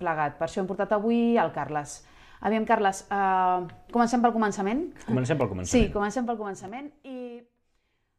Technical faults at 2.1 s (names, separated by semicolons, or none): none